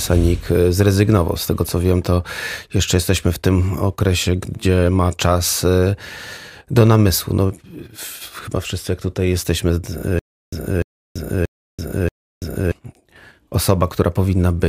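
From 10.19 to 12.72 s, just after "wszyscy jak tutaj jesteśmy", the speech breaks into a stutter with silent gaps: a burst of about 0.30 s plays, then about 0.33 s of dead digital silence, and the same fragment returns four times at a steady beat of roughly 0.63 s. This is likely a stalled player or stream replaying its last buffered fragment at each retry, so the speech due in that span never arrives.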